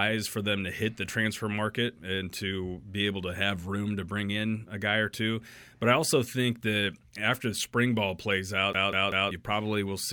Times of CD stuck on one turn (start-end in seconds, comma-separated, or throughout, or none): 8.73-9.31